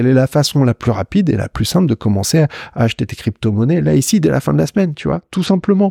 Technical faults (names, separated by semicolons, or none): Bluetooth SBC bit pool drop